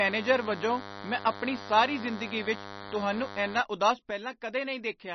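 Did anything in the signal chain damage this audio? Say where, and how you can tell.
Yes. The whole clip is band-limited, with nothing above 5.9 kHz, and the speech has the watery, swirling texture of heavy codec damage, with sibilants breaking into metallic chirps. The codec stage most likely applied MP3 compression at a low bitrate, somewhere around 30 kbps. Short of bits, the encoder cut the treble at a fixed frequency and zeroed weak spectral lines, which then flicker in and out from frame to frame.

From 0.00 to 3.61 s there is a steady, thin buzz at 100 Hz with a dense stack of harmonics, roughly 15 dB below the speech. This is DECT cordless phone buzz picked up in the analogue wiring. A nearby handset or base station transmits a radio burst every 10 ms, and the audio circuitry rectifies that envelope into the signal, producing the 100 Hz repetition rate.

At 4.11 s the level drops by 6 dB in a single step and stays down until the end of the clip. 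The speech and the background noise fall together, which marks it as a sudden gain jump and not a change in the talker's level. The likely cause is a digital gain setting or bit shift applied without a ramp, somewhere in the driver or call-processing stage.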